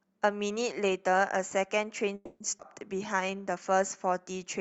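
A call audio freeze runs from 2.15 to 2.42 s: packets were likely delayed, so the sound stretches into a fading buzz filling about 250 ms, ending in 40 ms of silence, before resuming intact. A skip ahead follows at 2.58 to 2.61 s, where roughly 70 ms of audio is dropped and playback jumps forward almost seamlessly. From 2.94 to 3.75 s a jitter buffer slow-down repeats pitch periods to rebuild its reserve, adding 68 ms so the sound plays at 92% speed with unchanged pitch and a drawn-out feel. Throughout, the call path's Opus coding limits the audio to 8 kHz.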